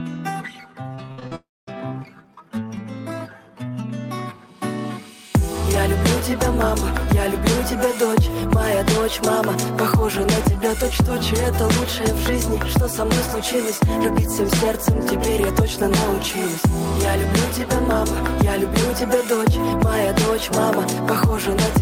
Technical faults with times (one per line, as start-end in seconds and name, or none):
0.95-1.33 repeated packet loss (robotic sound)
1.35-1.69 long network dropout